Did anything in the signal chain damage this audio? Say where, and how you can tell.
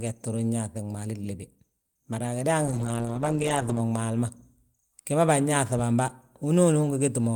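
Yes: a call bitrate drop at the codec, 2.66–3.91 s. The speech turns rough, watery or muffled, fitting roughly 32 falling to 11 kbps, and the spectrogram's upper band thins and smears.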